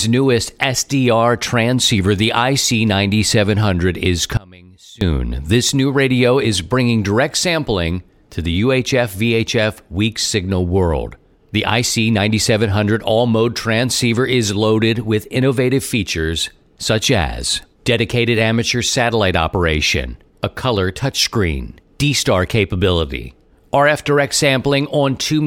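At 4.37 s the speech abruptly drops away to a faint residue, roughly 25 dB below its normal level, returning at 5.01 s. This 0.64 s audio dropout to a faint residue likely comes from the signal feed breaking while the downstream path stayed live.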